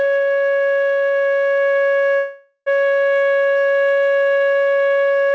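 It's a piece of music carried over a call link, with a call audio freeze from 2.16 to 2.68 s. The music stalls for about half a second: the last sound is stretched into a fading buzz that drops to roughly 100 ms of silence, then playback carries on exactly where it left off, so nothing is lost, just pushed later. That's likely packets held up in transit leaving the jitter buffer empty until they arrive. Nothing above 8 kHz survives, which fits a wideband G.722 call codec at around 64 kbps.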